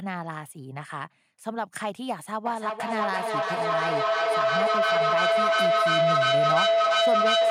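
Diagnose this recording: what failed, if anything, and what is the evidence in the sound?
Feedback howl from 2.46 s to the end: an acoustic loop between two call devices builds a tone near 700 Hz, about 8 dB above speech, pulsing roughly every 0.3 s, and it grows instead of decaying like echo.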